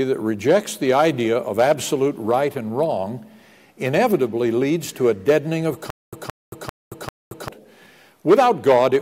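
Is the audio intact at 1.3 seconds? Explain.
Yes, the audio is intact at 1.3 seconds, with no audible dropout, click, distortion or other fault at that moment.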